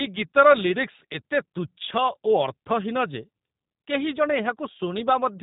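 Throughout the speech, the audio has passed through a G.729 codec, which discards the actual waveform and rebuilds each 10 ms frame from a vocal tract filter, a pitch predictor and a handful of pulses, a coarseness which fits an 8 kbit/s link. Plainly audible as a result: nothing survives above 3.8 kHz, so the sound is dull and boxed in, and the rebuilt excitation gives it a rough, slightly synthetic buzz.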